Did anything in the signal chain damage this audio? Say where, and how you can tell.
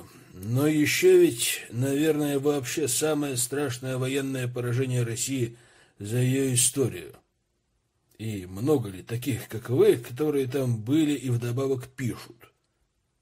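No, nothing in the audio stood out on listening as a sign of damage at any stage of the chain.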